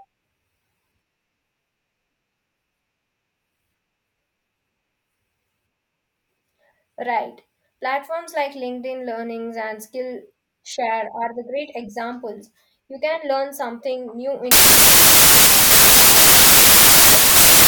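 A speech recording that, from 14.51 s to the end at 17.67 s, turns into loud harsh noise with the speech faintly buried, running about 1.33 times fast and high in pitch. This is a wrong sample width fault: packed 24-bit samples read as 32-bit integers, mixing bytes across samples.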